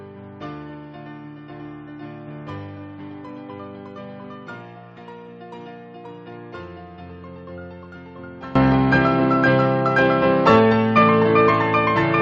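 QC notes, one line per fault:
0.0–8.55 s, one channel inverted: summed to mono the sound drops by about 21 dB to a faint residue, likely from reversed polarity on one side cancelling the shared content.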